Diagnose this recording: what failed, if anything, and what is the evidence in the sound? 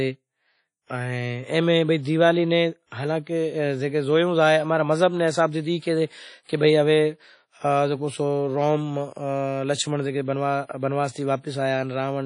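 The codec stage is the culprit: the speech is band-limited throughout, with nothing above about 10.1 kHz, and it sounds washy and ringing, with hiss breathing along with the signal. That's likely WMA compression at a low bitrate, fitting roughly 32 kbps, smearing quantisation noise across long transform blocks.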